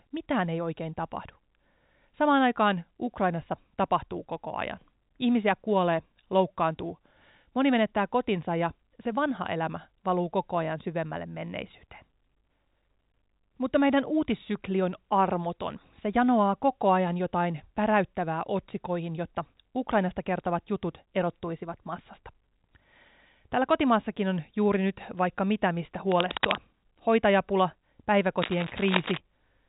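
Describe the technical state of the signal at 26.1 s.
Cable scratch noise runs from 26.07 to 26.63 s: dense, uneven bursts of crackle, roughly as loud as the speech, rasp across the band-limited telephone sound. This is likely a worn cable or connector shifting, its contact resistance fluctuating rapidly.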